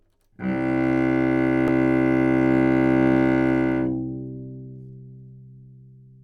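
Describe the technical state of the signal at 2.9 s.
At 2.9 s the signal is intact, with no audible fault at that moment.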